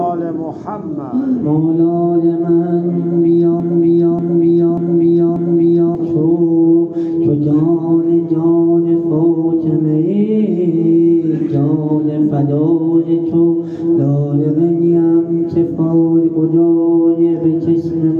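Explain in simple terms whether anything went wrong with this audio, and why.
Something in the playback or streaming chain likely stalled around 3.6 seconds and kept resending the last piece of audio it held. The result is a broken-record loop: a 0.59-second fragment repeats four times back to back until 5.95 seconds, and whatever should have played there is lost.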